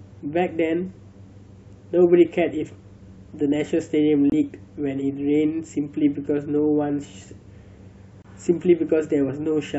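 At 4.30 s and 8.22 s, corrupt frame muted: the decoder rejected damaged frames and silence replaced them, leaving abrupt 35 ms and 42 ms holes that appear as hard-edged blank columns and flatlined waveform.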